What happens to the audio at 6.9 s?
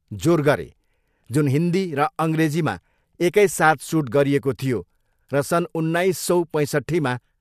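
Nothing goes wrong at 6.9 s; the speech carries on intact through that moment, with no dropout, click or distortion.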